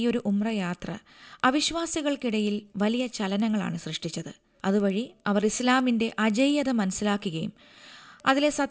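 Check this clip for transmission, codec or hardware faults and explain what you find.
One fault runs through the whole clip: the resampler restarted on every block. The audio was converted from 44.1 kHz to 16 kHz in separate 100 ms chunks, so each chunk edge lacked true neighbouring samples, leaving a 10 Hz ticking under the speech. A spectrogram shows thin vertical lines every 100 ms, fading in pauses.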